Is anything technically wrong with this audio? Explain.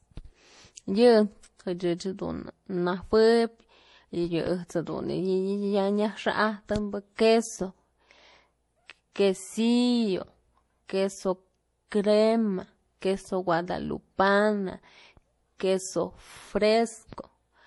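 Yes. Throughout the speech, nothing is heard above 11.5 kHz. Different kinds of codec artefacts are heard together. This is likely transcoding between lossy codecs, which fits MP3 and then Vorbis at low bitrates. The second codec re-encodes the first codec's damage, and both sets of artefacts stack.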